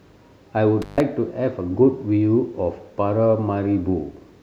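Speech in which the sound drops out between 0.82 and 1.00 s, with crackle at each edge and a gap of about 134 ms. This is an intermittent contact, a loose cable or plug briefly opening.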